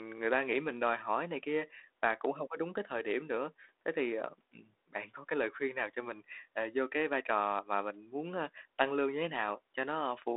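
Nothing in the speech stood out as a technical fault on listening.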